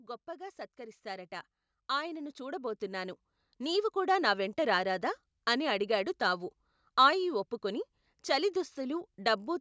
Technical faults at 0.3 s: automatic gain rising

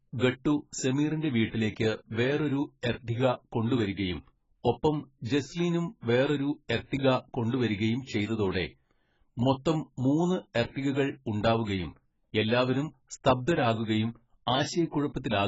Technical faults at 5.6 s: AAC compression

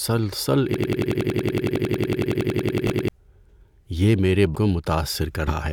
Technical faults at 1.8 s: system hang loop; compressed frames skipped

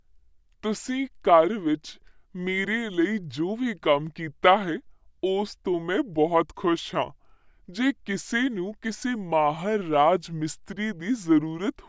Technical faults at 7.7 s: wrong sample rate

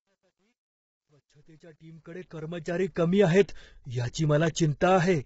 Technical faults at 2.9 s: low-delay AAC compression; truncation distortion on a fade

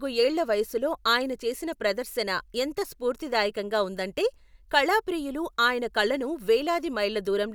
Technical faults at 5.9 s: none

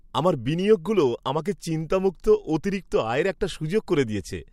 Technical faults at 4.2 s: none

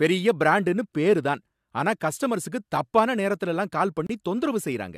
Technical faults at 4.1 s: gap between stream segments

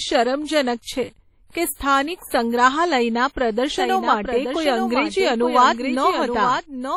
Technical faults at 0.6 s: WMA compression

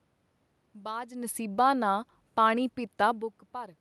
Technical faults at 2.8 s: none

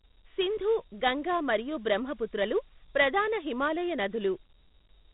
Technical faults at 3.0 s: Dialogic VOX ADPCM

